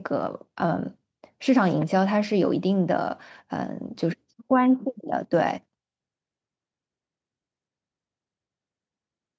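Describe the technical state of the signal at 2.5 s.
At 2.5 s the speech signal is intact, with no fault present; it simply carries the sound of ordinary call microphone processing, with nothing above 8 kHz and the lowest bass trimmed away.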